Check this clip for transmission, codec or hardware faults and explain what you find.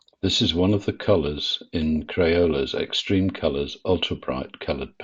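No transmission, codec or hardware faults.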